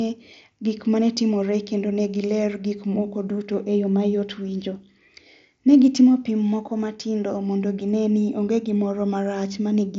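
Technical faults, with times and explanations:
No faults turn up anywhere in this speech, which comes over a Bluetooth headset link using the mSBC codec, so it reaches up to about 8 kHz with just a faint grainy texture on the louder moments.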